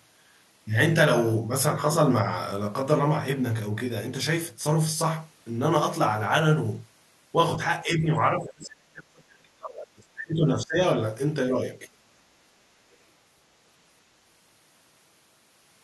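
Channel delay (comb filtering) runs through the whole clip: one channel arrives roughly 20 ms behind the other, and summing them to mono cancels shared content at evenly spaced frequencies, starting around 30 Hz. The speech sounds rough and slightly doubled.

Speech suppressed in double talk, from 7.84 to 10.8 s: the talker's level falls by about 35 dB in places across roughly three seconds, dipping and thinning. The likely cause is an echo canceller that couldn't tell the talker from overlapping far-end sound and turned both down.

Other side's voice leaking through, at 12.92 to 12.96 s: a brief scrap of a second voice, about 40 dB below the main speech, slips in for some 40 ms. It likely comes from loudspeaker playback that the echo canceller left in the microphone signal.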